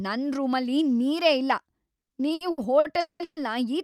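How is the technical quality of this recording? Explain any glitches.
The speech has a bout of repeated stalls (stutter) from 1.99 to 3.39 s, just after "ನನ್ ರೂಮಲ್ಲಿ ನೀರೇ ಇಲ್ಲ". Late packets drained the jitter buffer seven times. Each gap was filled by stretching the last sound, up to 190 ms, so it drags without losing anything.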